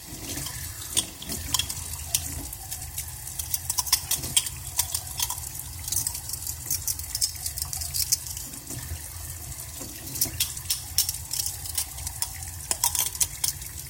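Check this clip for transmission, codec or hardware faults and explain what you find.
Three short skips in the sound, at 2.81 s, 6.99 s and 10.57 s, each a sudden jump, are likely dropped buffers (overrun). The recording side fell behind, a block of samples was overwritten before being read, and the audio either side was spliced together. Roughly 20 ms goes missing at the first and around 50 ms at the other two. Unlike a dropout, there is no gap of silence; the sound simply leaps ahead.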